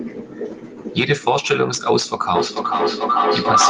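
From 2.35 s to the end of the clip there is feedback echo between two devices. Two devices in the same room are on the call, and each one's microphone picks up what the other plays. Neither echo canceller removes the other device's output, so the speech goes round the loop every 0.4 s or so. Each pass returns thinner and more ringing. The loop is loud enough that the repeats build up to about 3 dB above the speech instead of dying away.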